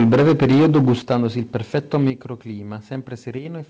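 From the start to 1.26 s the speech is harsh and crackly. This is microphone overload. The input likely ran about 14 dB too hot. Roughly a fifth of the waveform hits the converter's limit, and the flattened peaks sound gritty.

At 1.02 s the level drops suddenly by 8 dB. This is the microphone volume stepped down, likely by the call software reacting to the clipping. Voice and background fall together in one step.

From 1.55 to 2.1 s the overload returns, milder. The input was likely about 3 dB over. Only a small share of peaks is cut, so the crackle is lighter.

At 2.1 s the microphone volume steps down again by 8 dB, likely the same automatic correction. The whole sound drops at once.

From 3.39 to 3.45 s one channel drops out. A stereo channel was likely lost briefly. After the mono sum, the shared sound dips by 6 dB and is otherwise unchanged. Throughout, the G.722 call path leaves nothing above 8 kHz.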